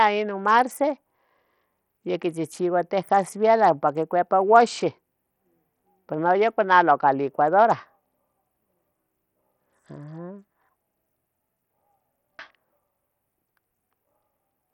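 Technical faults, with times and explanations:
throughout, Bluetooth SBC compression: flickering, dropping treble with gritty noise and aliasing, likely a starved bit pool consistent with about 64 kbps; nothing above 19.7 kHz.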